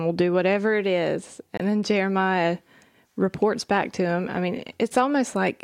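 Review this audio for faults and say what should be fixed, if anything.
A corrupt frame decoded at 1.57 to 1.61 s, right after "do whatever it is", gives a short glitch peaking at about -15 dBFS. Damaged bits in roughly two compressed frames were decoded as if valid, so misread gains and codes put energy at the wrong frequencies for those 40 ms. A dropout would leave silence or a smeared concealment, but here stray content is added. Enabling checksum verification, with concealment of frames that fail it, would prevent this.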